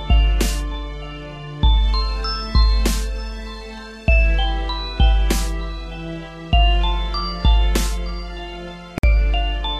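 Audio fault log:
8.98 to 9.03 s: gap at a join of encoded pieces. The sound drops out for 53 ms, with softened edges, then resumes where it stopped. Separately encoded segments were joined untrimmed, leaving padding silence.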